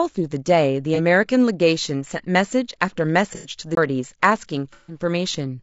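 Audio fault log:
Throughout: low-delay AAC compression, likely AAC-ELD at a low bitrate; short frames smear harmonics into grainy, rough speech, spectrogram showing noise filling between harmonic lines.
0.95–1.0 s, 3.35–3.49 s, 4.73–4.99 s: AAC frame loss with concealment; decoder reuses the last spectrum, giving smeared, noisy patches of about 30, 90 and 150 ms, seen as blurred spectrogram blocks.
3.75 s: CD skip; the player mutes for about 20 ms, then resumes elsewhere, showing a brief waveform gap and a discontinuous jump.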